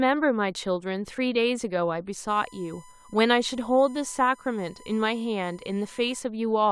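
USB whine from 1 ms bus frames leaks through power or ground into this speech, leaving a steady 1 kHz tone roughly 30 dB below it from 2.28 to 6.19 s.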